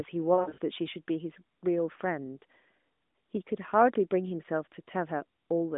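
A speech clip carried over the AMR narrowband mobile codec, band-limited to roughly 200 Hz to 3.6 kHz, shows lost AMR speech frames between 0.34 and 0.58 s. About 160 ms of audio goes missing across that 240 ms stretch, which fits eight lost 20 ms frames, in short runs of up to 60 ms. The decoder fills each gap by repeating its last good pitch and vocal tract settings at falling gain. That produces smeared, warbling dips rather than the hard clicks or dead silence of a plain dropout.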